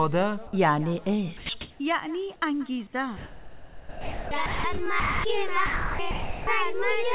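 At 1.37 to 1.49 s the sound cuts out and a steady, featureless hiss takes its place for 120 ms. This is sound dropped by the voice detector: the sending side most likely judged real content to be background and stopped transmitting, and the receiver filled the gap with comfort noise. Unlike a packet loss gap, there is no click, repeat or smeared concealment, just an even noise bed until the detector reopens.

From 1.61 to 1.79 s, during a pause where the background sits about 30 dB below the loud passages, comfort noise replaces the background for 180 ms. The real ambience gives way to a smooth, detail-free synthetic noise with a level shift of about 5 dB, likely from discontinuous transmission during silence. What separates it from a dropout is that no foreground sound is lost. Only the texture of the background changes.

Sound dropped by the voice detector then recurs at 3.17 to 4.31 s (the longest, over a second), 4.46 to 4.64 s, 5.0 to 5.24 s, 5.66 to 5.99 s and 6.11 to 6.47 s. 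Each time, content vanishes under the same flat noise. Throughout the clip nothing is heard above 4 kHz, which fits a narrowband G.711 call path.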